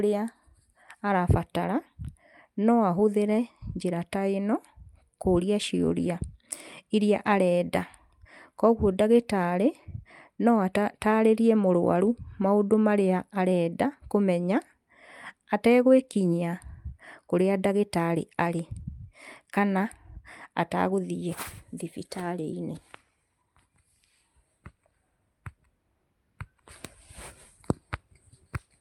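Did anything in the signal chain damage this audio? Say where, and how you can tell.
No, nothing in the signal chain audibly damaged this speech recording. There is no stage where a problem can be heard, so there is no fault to place or explain.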